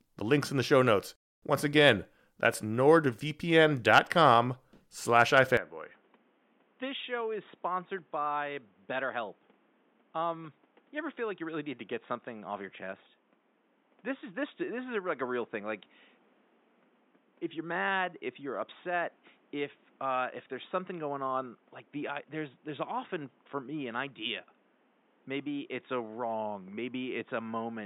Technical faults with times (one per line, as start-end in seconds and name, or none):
5.57-27.86 input switched to a poorer device